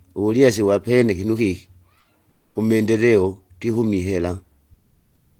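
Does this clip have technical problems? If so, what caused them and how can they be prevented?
Yes. In three pauses the real background is replaced by comfort noise: from 1.99 to 2.07 s (80 ms, about 2 dB quieter), from 2.31 to 2.55 s (240 ms, about 9 dB quieter), and from 4.75 s to the end (about 6 dB quieter). The room's texture gives way to a smooth, featureless hiss. This likely comes from discontinuous transmission, as in Opus DTX, where the sender stops coding during pauses and the receiver synthesises noise. A noise gate would leave near-silence rather than steady hiss. Disabling DTX on the sending side prevents it.

At 5.38 to 5.40 s, the onset is clipped by the voice detector. The sound returns abruptly, with about 20 ms of its soft start missing and comfort noise filling that gap. The detector was probably slow to register that sound had resumed. Unlike a dropout, nothing is lost once the sound is underway, and unlike a fade-in, the entry is sudden rather than gradual. 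Turning DTX off, or giving the voice detector more lookahead or a lower threshold, keeps onsets intact.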